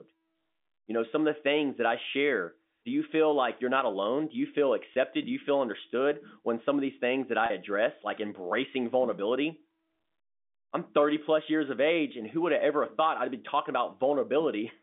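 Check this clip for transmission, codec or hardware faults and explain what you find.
Two brief dropouts show packet loss with pitch repetition: 4.94 to 4.96 s after "you feel", and 7.46 to 7.50 s after "these things that I", before "address like embracing vulnerability". The receiver bridged the 20 ms and 40 ms gaps by repeating the last pitch period, so each sounds like a briefly held, slightly buzzy tone. The 200 Hz to 3.6 kHz telephone band comes from the G.711 A-law line.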